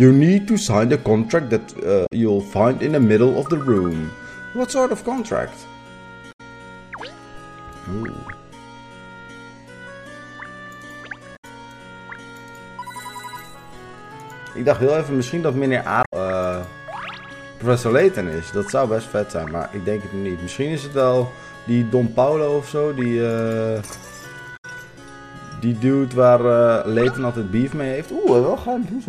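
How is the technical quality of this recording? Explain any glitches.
The recording is marred by damaged data in a compressed stream, occurring five times: at 2.03–2.12 s, 6.28–6.41 s, 11.33–11.45 s, 16.03–16.13 s and 24.53–24.65 s. Each event lasts roughly 0.1 s. Corrupted bytes in the encoded stream cause the decoder to misread those frames and lose sync until it finds a valid frame header again, so each spot is heard as a brief chirp, squawk or blip breaking into the sound.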